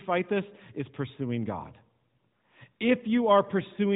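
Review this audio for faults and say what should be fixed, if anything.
Nothing here needs fixing, since no faults turn up in this speech clip. It has passed through the AMR narrowband mobile codec, so nothing above 3.8 kHz comes through, and the light coding texture fits the codec's top rate of 12.2 kbps.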